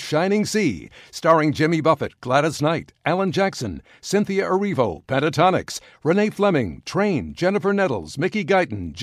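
No technical faults can be heard anywhere in the speech recording, and the signal stays steady and intact throughout.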